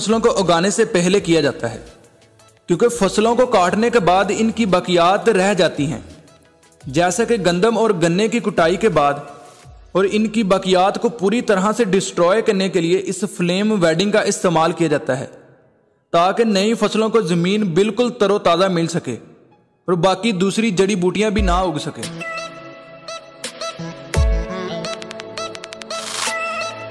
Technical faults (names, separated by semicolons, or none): none